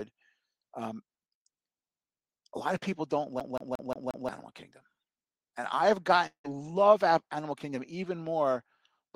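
Speech runs through the clip, and two distinct faults break it. From 3.40 to 4.29 s it behaves like a CD stuck on one turn: the same 178 ms fragment plays five times in an even, rapid stutter, each jump marked by a brief mute. The identical repeats and mechanical rhythm are what separate it from a network gap. From 6.26 to 6.46 s a different break appears, most likely a long network dropout. Nothing repeats; the last sound is stretched into a fading buzz, then about 100 ms of silence. Speech resumes with roughly 180 ms missing rather than replayed.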